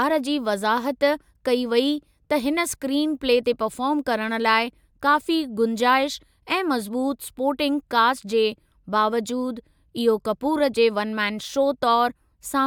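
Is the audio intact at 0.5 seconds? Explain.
Yes, the speech at 0.5 seconds plays through intact, with no dropout, click, distortion or other fault at that point.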